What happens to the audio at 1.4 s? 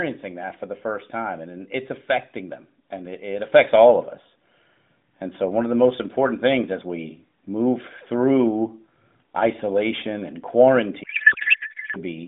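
Nothing goes wrong at 1.4 s: the speech carries on intact through that moment, heard through the narrowband mobile line with its usual 150 Hz to 3.7 kHz band.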